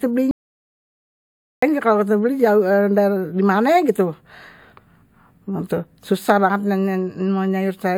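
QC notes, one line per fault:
0.31 to 1.62 s, audio dropout to silence. The speech cuts out abruptly and returns mid-flow about 1.3 s later. The gap is dead silence with no room tone. The input was likely lost while recording continued writing silence. Whatever was said there is gone.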